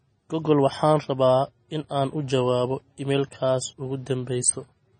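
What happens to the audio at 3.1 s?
At 3.1 s the speech carries the same heavy MP3 compression damage heard throughout. The bit-starved encoder, which fits a bitrate around 24 kbps, likely stripped everything above 9 kHz and let weak bands flicker, giving a watery, swirly sound. A spectrogram shows a flat ceiling at 9 kHz with patchy, blinking gaps.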